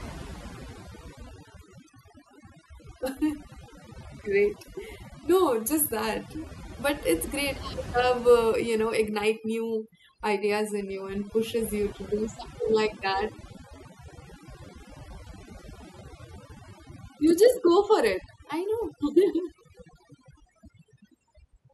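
Overdone noise removal runs through the whole speech clip. A noise reduction stage was set far too strong. It cuts any frequency band near its noise estimate, taking quiet parts of the voice too. The background drops and breaks up into twinkling specks.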